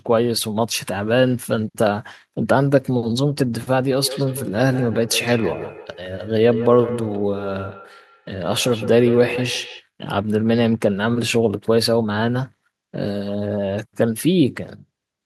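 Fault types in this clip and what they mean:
Feedback echo between two devices: two devices in the same room are on one call, so one plays back what the other's mic sent and that mic hears it again, and neither echo canceller touches sound from the other device. From about 3.96 to 9.86 s the speech comes back at a steady gap of roughly 150 ms, thinner and ringier than the original, peaking at about 11 dB below the direct speech.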